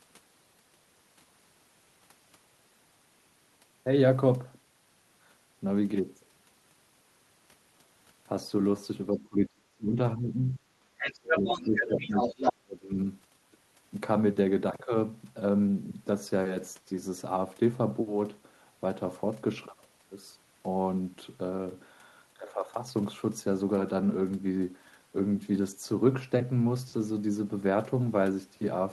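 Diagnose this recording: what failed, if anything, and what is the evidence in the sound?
Call processing: the echo canceller likely mistook double talk for echo, so speech is suppressed in double talk, dipping by up to about 35 dB at 9.11–9.98, 10.16–10.67, 11.40–11.47 and 11.65–13.08 s.

Call processing: echo cancellation likely left residual loudspeaker pickup, so the other side's voice leaks through from 10.99 to 12.53 s, about as loud as the talker.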